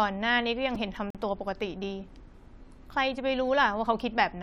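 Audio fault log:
0.75 s, repeated buffer: new audio arrived late, so the same tiny slice, about 2.9 ms long, which fits a 128-sample buffer, played three extra times with a hard join at each repeat. Because the piece is so short, the stutter sounds like a brief buzzy click, and roughly 10 ms of speech is lost.
1.10 to 1.15 s, gap between stream segments: the time stamps at the join between two segments left a hole, which the player filled with about 44 ms of silence. The sound drops out abruptly with hard edges and then resumes, and no speech is lost.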